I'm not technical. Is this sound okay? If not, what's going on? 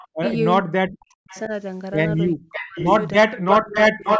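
No, not quite. Two things are going wrong in this speech, and both look like a phone or video call where one side is on a loudspeaker.

The first is an echo leak. A delayed copy of the voice comes back, most likely because the loudspeaker's sound got into the microphone and wasn't fully cancelled. At 0.0 to 0.36 s and 1.29 to 1.48 s it's faint and trails about 0.4 s behind. From 2.52 to 2.99 s it's stronger and about 0.56 s late, and from 3.45 s to the end it's as loud as the voice itself.

The second is speech suppressed in double talk. When both sides talk at once, the call's echo canceller likely can't tell the real talker from the echo and turns everything down. The voice sinks to near silence in chunks: briefly at 0.16 to 0.24 s, then across 0.61 to 1.51 s, 2.34 to 2.78 s, and from 3.23 s to the end.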